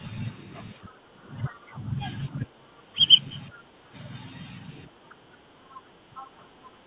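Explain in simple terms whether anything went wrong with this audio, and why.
Speech suppressed in double talk happens twice, from 0.75 to 3.94 s and from 4.87 to 6.69 s. The likely cause is that both people on the call were talking at the same time. The device's echo canceller could not tell the talker apart from the other person's voice coming out of its own loudspeaker, so it turned everything down. In each stretch, about two seconds of the talker's speech in total is hit. The voice sinks sharply, becoming much quieter in the first stretch and a little less so in the second, and sounds dipped and patchy.

The other side's voice leaking through is heard four times: 0.89 to 1.57 s, 3.52 to 3.61 s, 5.10 to 5.15 s, and from 5.79 s to the end. The likely cause is that the talker's device plays the other person on a loudspeaker, and the echo canceller did not fully remove that sound from the microphone. 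A second, fainter voice sits underneath the main one, as brief scraps or, in the first and last stretches, for longer. The leaked voice is always well below the talker, and quietest in the short scrap at 5.10 s.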